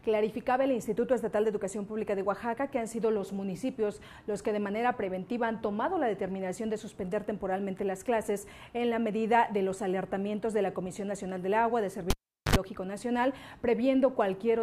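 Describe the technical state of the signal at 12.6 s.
At 12.6 s the signal is just recovering from a cable pulled and plugged in, spanning 12.10 to 12.56 s. A live connector was withdrawn, giving a pop and roughly 0.4 s of near silence. On reinsertion the tip touched first, leaving the input unshielded and ungrounded, so about 68 ms of 50 Hz mains buzz came through before full contact restored the audio with a second pop at about 12.56 s.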